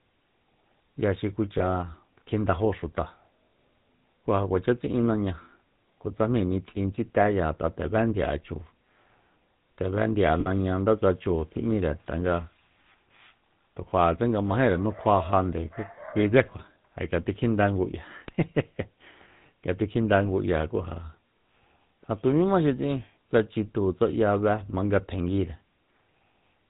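Throughout, the speech carries the buzzy, gravelly texture of the GSM full-rate codec, consistent with its 13 kbps mode. The vocal tract is modelled and excited by sparse regular pulses, so nothing above 4 kHz survives and the roughness is plainly audible.

Lost GSM frames occur at 1.58–1.62 s, a gap that fits a single 20 ms frame, and at 10.40–10.47 s, about 60 ms. The decoder repeats the last good frame, producing a brief rough, metallic ring instead of a clean gap.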